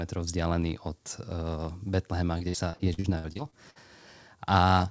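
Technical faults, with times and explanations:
2.38–3.77 s, repeated packet loss (robotic sound): packets kept going missing or arriving late, leaving 11 holes, the longest 61 ms. About 410 ms was patched by repeating the last sound, so this stretch turns choppy, with pieces dropping out.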